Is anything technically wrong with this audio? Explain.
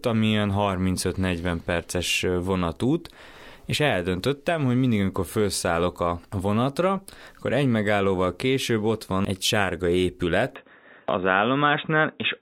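Yes. From 10.56 s to the end at 12.41 s the input has likely switched to a poorer device. The speech abruptly turns dull and boxy with nothing above 3.8 kHz, and a faint new noise floor appears, while level stays roughly unchanged and the switch leaves no gap.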